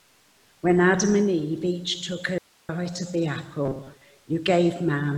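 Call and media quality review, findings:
Audio dropout to a faint residue, 2.38–2.69 s: signal gone for about 307 ms, only hiss remains at roughly 35 dB below program level. Abrupt cut and return, no fade. Likely upstream capture or transport break while the downstream path stayed live.

Robotic sound from repeated short buffers, 3.65–4.01 s: rigid metallic buzz at 134 Hz riding the audio. Likely late buffer delivery, with the last ~7.5 ms block replayed as filler, so around half the real audio is skipped.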